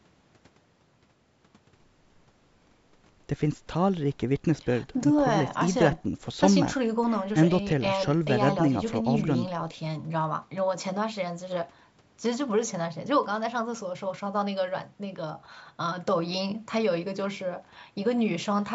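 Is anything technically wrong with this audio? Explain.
No, this speech carries no technical faults: it has the ordinary character of call microphone processing, with the lowest bass trimmed by the usual high-pass filter and no content above 8 kHz, which is expected for that path.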